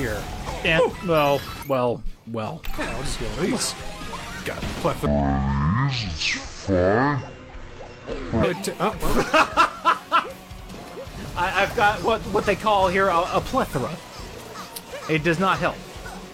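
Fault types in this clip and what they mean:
Damaged data in a compressed stream: corrupted bytes in the encoded stream make the decoder misread frames, lose sync and search for the next valid frame header. From 0.75 to 0.80 s this is heard as a short glitch.
Section at the wrong speed: this passage was likely played against the wrong clock, running at 0.519 times its proper rate. From 5.06 to 8.43 s pitch and tempo fall together, about ten semitones lower, leaving the sound deep and dragging.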